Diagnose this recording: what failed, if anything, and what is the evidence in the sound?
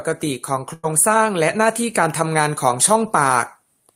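The network stage failed with a burst of packet loss from 0.73 to 0.85 s in this speech. Roughly 0.1 s of audio never arrived, and the receiver filled the hole by extending the last sound and fading it, so a held buzz or hiss replaces the speech. On a spectrogram the last sound runs flat and smeared before dimming. In the waveform the envelope decays, then the speech restarts abruptly with about 100 ms missing.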